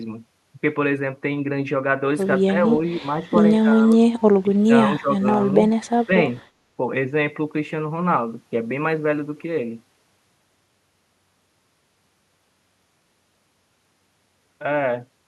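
Speech suppressed in double talk occurs in this speech clip at 2.47–2.82, 3.21–3.28, 3.62–4.03, 4.42–4.72, 5.0–5.21 and 6.06–6.12 s. The level dips by roughly 5 to 25 dB, deepest near 4.4 s. The likely cause is an echo canceller that mistook overlapping talk for echo and turned the talker down.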